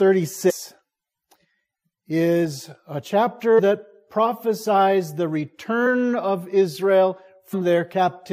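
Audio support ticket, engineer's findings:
Compressed frames skipped at 0.49–0.51 s, 3.58–3.60 s, 5.85 s and 7.53 s. Audio jumps ahead roughly 300, 100, 50 and 200 ms, i.e. a handful to around ten frames of about 23.2 ms each. Probable component: decoder discarding damaged frames, or frames missing from the file. Waveform: abrupt envelope discontinuity, no gap. Spectrogram: vertical seam where content shifts without a silent column.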